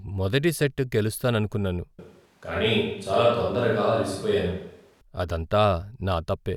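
Switch to a distant microphone, from 1.99 s to 5.01 s in this speech recording: the voice abruptly turns roomy and hollow with thinner bass, then snaps back. The level barely changes, and the background noise sits about 40 dB below the speech. The likely cause is the close microphone dropping out and a farther one carrying the sound.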